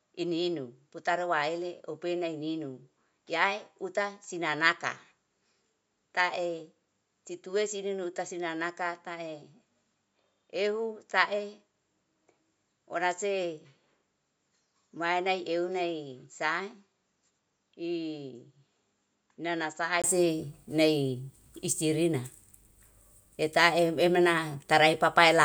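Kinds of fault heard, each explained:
Input switched to a poorer device: From the start to 20.04 s, the speech is band-limited, with nothing above 7.6 kHz. It sounds dull and a few decibels quieter, with a faint noise floor of its own sitting far below the voice. At 20.04 s a 20 ms gap marks the change, and the full, brighter sound takes over. The likely cause is the system capturing from a narrower-band microphone or headset profile before switching to the proper input.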